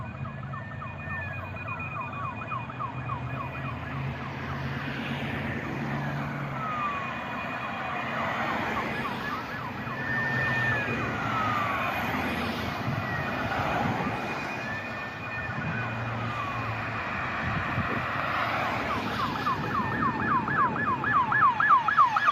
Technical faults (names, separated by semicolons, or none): none